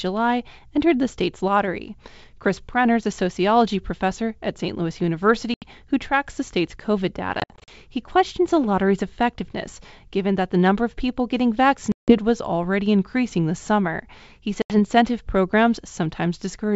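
Packet loss on an ADPCM call cuts hard-edged silent holes at 5.54 to 5.67 s (80 ms, before "who tracks the state's"), 7.40 to 7.69 s (160 ms scattered over 280 ms), 11.92 to 12.18 s (160 ms, after "number of people getting") and 14.62 to 14.73 s (80 ms). The G.722 decoder's predictor and step size then lag the sender's, so the speech returns with brief, slight distortion, settling within tens of milliseconds.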